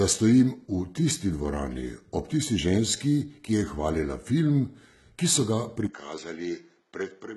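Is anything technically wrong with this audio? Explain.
Yes, there are two faults.

From start to finish the speech carries heavy HE-AAC compression artefacts. The likely cause is HE-AAC coding at a very low bitrate, around 16 kbps. Only the lower spectrum is coded properly. The treble up to 11.8 kHz is rebuilt by copying lower bands upward under a coarse envelope, so its harmonics don't line up with the real ones. The s sounds come out gritty and metallic. A plain low-pass filter would sound dull rather than bright, and that is what tells this apart: the treble is still there, but it is synthetic.

At 5.87 s there is a 20 ms gap, and from then to the end the sound is different. This is most likely an input switched to a poorer device. Nothing is left above 7.6 kHz, so the speech turns duller and boxier. The level drops by roughly 10 dB, and a faint new noise floor appears well below the speech. 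The codec fault is steady across the clip, but this change happens abruptly at one moment and shifts tone, loudness and background together, which points to a change of hardware rather than of coding.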